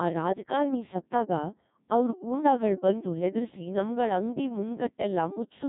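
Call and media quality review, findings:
Codec 2 vocoder in path, whole clip, heavy damage; low-rate parametric coding, fits about 1.6 kbit/s. Waveform resynthesised from sine waves, speech robotic and buzzy throughout.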